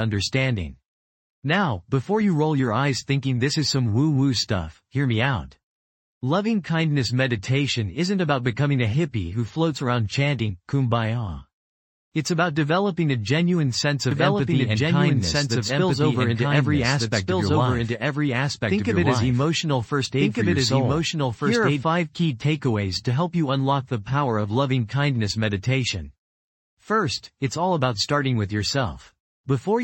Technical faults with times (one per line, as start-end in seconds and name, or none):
14.11-21.83 doubled audio track